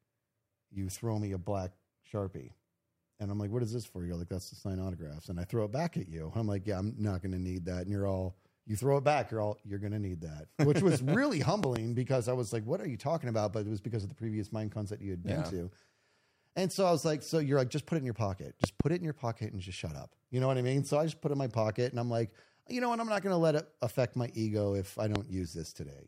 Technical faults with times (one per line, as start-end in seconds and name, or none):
11.64-11.78 loud pop
18.64-18.83 loud pop
25.16-25.18 loud pop